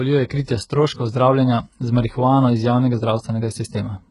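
Across the whole recording, the speech has a gritty, metallic treble: s sounds come out lispy and smeared, and nothing reaches above about 11.1 kHz. This is likely heavy HE-AAC compression, with a rebuilt upper band that fits a very low bitrate near 12 kbps.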